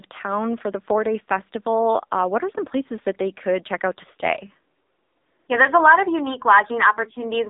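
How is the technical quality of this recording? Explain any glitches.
Technical quality is poor throughout the whole clip due to AMR narrowband mobile codec damage. The speech has been carried at an 8 kHz sample rate, so nothing above 3.8 kHz survives. The codec rebuilds the voice from a vocal-tract model excited by sparse pulses in short subframes. Heavy artefacts suggest a low mode, which fits roughly 6.7 kbps, leaving the voice buzzy, synthetic and muffled. Faint room noise sits about 51 dB below the speech.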